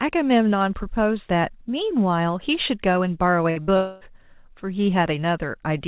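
Right around 3.50 s there's a burst of packet loss, from 3.50 to 3.59 s, and a second one right after, from 3.62 to 3.71 s. Each time the receiver covered the hole by stretching out the last bit of sound for roughly 58 ms, so you get a short held buzz or hiss that dips away. Then the speech picks up about 60 ms further along, with that slice just gone, which makes it sound clipped and jumpy.

Then at 3.77 s things break up for longer. From 3.77 to 4.04 s the last sound gets smeared into a fading buzz or hiss that runs the whole stretch, about 240 ms of it, without ever settling into silence. When the audio comes back, roughly a quarter second of speech has been skipped. That's most likely a long network dropout rather than a short burst. Across the clip the band tops out at 4 kHz, which fits a 64 kbps G.711 call line.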